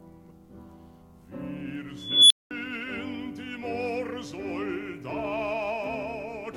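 At 1.97 s the music is swamped by an unstable filter: a recursive stage with bad coefficients feeds on itself, so a whistle around 3 kHz swells over about 336 ms until it clips, overflows and cuts to about 205 ms of silence, ending at 2.51 s. Acoustic feedback would hold at a steady howl rather than collapsing into silence.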